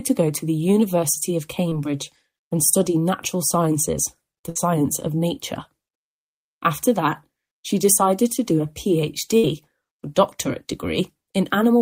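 Two bursts of packet loss interrupt the audio, at 4.49 to 4.57 s and again at 9.37 to 9.45 s. Each time, a short run of packets never arrived in time, so the receiver padded about 60 ms by extending the last sound it had and fading it down, heard as a brief held buzz or fading hiss. Playback then jumps ahead, and about 60 ms of the original audio is simply gone at each point.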